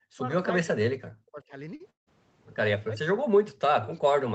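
It's a speech clip that's been through a call, and it's band-limited to 8 kHz, as you'd expect from a wideband call path. The most obvious problem is speech suppressed in double talk. The speech sinks by something like 40 dB, or cuts out in pieces, from the start to 0.26 s, again from 0.66 to 1.54 s, and then from 2.85 s right through to the end. The likely cause is the far side talking at the same moment, so the echo canceller couldn't tell this talker from its own loudspeaker echo and clamped down on everything. In the middle there's a short stall from a late packet at 1.75 to 1.82 s. A packet showed up late, the jitter buffer ran dry, and the receiver stretched the last bit of sound for about 46 ms to cover the wait. You hear one sound held a touch too long, but nothing is actually lost. Right after that comes a call audio freeze from 1.90 to 2.09 s. Packets were likely held up, so the receiver kept extending the last sound before it faded, leaving roughly 150 ms of near-silence. 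The speech then picks up exactly where it stopped, so you get about 168 ms of inserted gap rather than missing audio.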